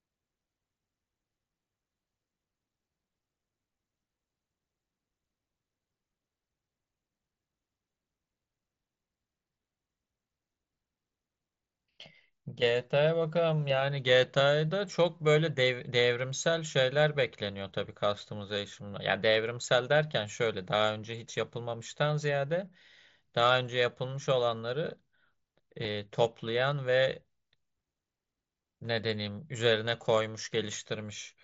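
At 25.84 s and again at 29.85 s, there is concealed Bluetooth headset packet loss. Speech packets from the headset never arrived. The receiver patched each gap by repeating a matching stretch of recent waveform. The first gap lasts 7.5 ms and the second 15 ms, which fits one and two lost packets. The single loss is nearly hidden, while the run of two gives a buzzy tone held at full level, with a small warble where the speech returns.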